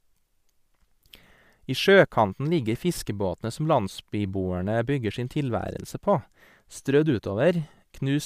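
No audible faults anywhere in this recording.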